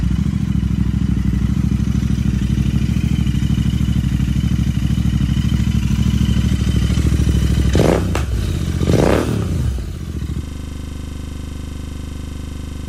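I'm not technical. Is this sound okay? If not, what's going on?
No. At about 10.44 seconds the computer or its audio driver froze, but the sound hardware kept replaying whatever was left in its small holding area for outgoing audio. This is a system hang loop. The same 40-millisecond scrap of sound repeats about 60 times, 25 times per second, right to the end of the clip. Instead of the sound carrying on, you hear a rough, steady buzzing rattle.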